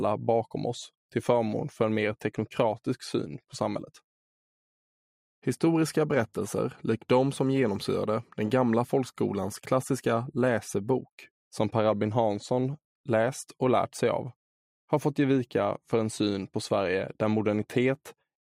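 No technical faults can be heard anywhere in the recording.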